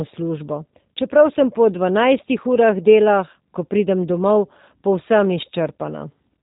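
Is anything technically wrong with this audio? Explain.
Yes. Throughout the speech, G.729 codec damage is plainly audible. The codec rebuilds each 10 ms frame from a vocal tract filter, a pitch predictor and sparse pulses, a scheme that fits 8 kbit/s, so voicing sounds rough and synthetic, with nothing above 3.8 kHz.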